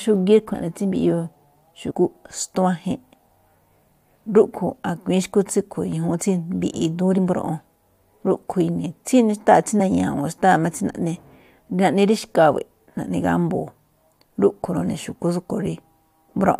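Compressed frames skipped at 0.53 s, 1.90 to 1.92 s, 7.17 s and 9.79 s: the speech jumps ahead where whole coded frames never reach the output, either missing or rejected by the decoder as damaged. The gaps are about 70 ms at the first two points, about 40 ms at the third and about 20 ms at the last, which fits frames of roughly 21 ms.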